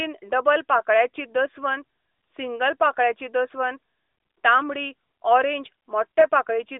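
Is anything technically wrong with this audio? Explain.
Yes. From 6.20 to 6.25 s, lost AMR speech frames cause a brief dip or warble in the narrowband, light-codec speech. The decoder repeats the last good parameters at reduced gain, consistent with one lost 20 ms frame.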